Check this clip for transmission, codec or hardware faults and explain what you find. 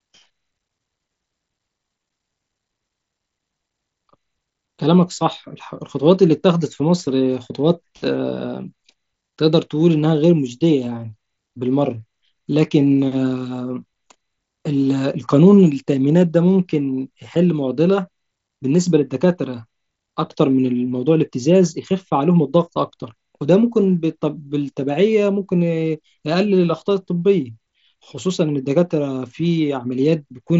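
Nothing stood out on listening to this speech clip, which comes across as expected for a wideband Bluetooth headset link with content reaching up to about 7.7 kHz.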